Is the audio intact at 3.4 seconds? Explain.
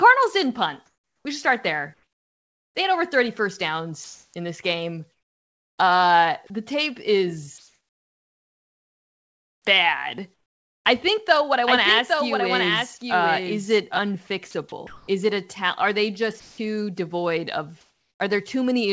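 Yes, the audio is intact at 3.4 seconds, with only the ordinary band limit of the call path, which carries nothing above 8 kHz.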